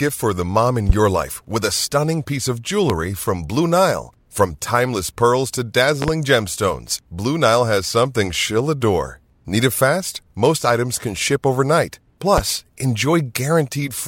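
At 0.90 to 0.93 s, between "for the mom in" and "your life with a", a loud pop stands roughly 20 dB above the speech. Single pops follow at 2.90 to 2.93 s after "a stunning piece of" and at 12.38 to 12.41 s. A double pop sounds at 6.02 to 6.11 s after "timeless pearls to". These are each about 15 dB above the speech, which continues underneath. A sudden voltage step, likely from a switch, plug, static or driver glitch, was added to the signal.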